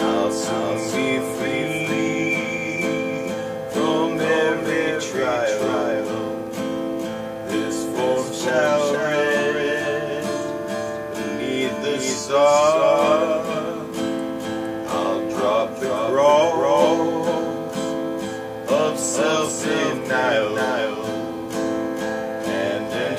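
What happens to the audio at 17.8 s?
At 17.8 s you're hearing the doubled audio track that runs the whole clip: a dry copy trailing about half a second behind, roughly 5 dB down, likely from a second, slower capture path.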